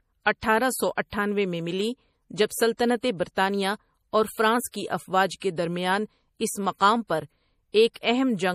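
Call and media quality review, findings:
Watery, swirly texture throughout, with metallic chirps on sibilants and smeared onsets. Likely MP3 compression at a low bitrate, consistent with about 40 kbps. Spectrogram: hard treble cutoff, nothing above 15.1 kHz, and speckled high-band regions where weak lines switch on and off between frames. The encoder drops treble and zeroes quiet frequency content when starved of bits.

Pre-echo at 2.46 to 2.50 s, spread 45 ms, and at 4.71 to 4.74 s, spread 24 ms. Short hiss heard just ahead of sharp attacks, which sound softened. Component: transform codec block quantisation. Noise sized for the loud attack is spread across the whole block, including the quiet moment before it. Waveform: low fuzzy ramp before each transient. Spectrogram: broadband smear leading the onset.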